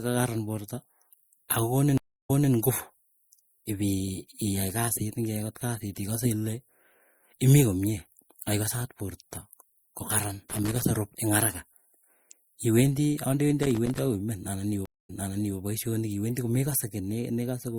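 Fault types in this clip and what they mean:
MP3 compression: Throughout the speech the audio sounds watery and swirly, with dulled treble and smeared consonants. This is likely heavy MP3 encoding, which fits a bitrate around 64 kbps, where the encoder drops weak frequency lines and cuts the top end to save bits.
stream reconnect: The connection drops, the sound goes silent, and a fresh decoder picks up mid-stream. At 1.98 s there is a 315 ms gap, then speech resumes 235 ms earlier. At 14.86 s a 231 ms gap is followed by a 496 ms repeat.
loose connector crackle: A worn or dirty contact rapidly makes and breaks, chopping the signal into irregular scratchy bursts. Two such bursts of crackle are heard, from 10.50 to 10.83 s and from 13.63 to 13.99 s, each lasting about a third of a second.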